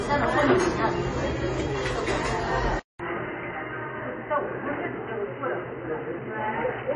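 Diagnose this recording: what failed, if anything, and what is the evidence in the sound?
Codec stage: transcoding between lossy codecs. Throughout, nothing sounds above 10.5 kHz, and smeared, swirly artefacts of two different kinds overlap. The likely cause is a chain of lossy encodes, fitting a low-bitrate AAC pass followed by MP3. A spectrogram shows a hard ceiling at 10.5 kHz with patchy, blotchy high bands.

Input stage: input switched to a poorer device. At 2.79 s the sound drops out for 200 ms, then returns duller and boxier until the end, with nothing above 3 kHz, the level about 5 dB lower, and a new steady noise floor well beneath it. This is likely a change to a narrowband headset or second microphone. The spectrogram shows a gap, then the ceiling falling from 10.5 kHz to 3 kHz, and the waveform's envelope steps down.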